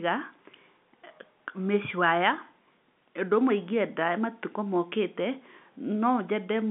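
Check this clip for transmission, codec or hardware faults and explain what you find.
No transmission, codec or hardware faults found here.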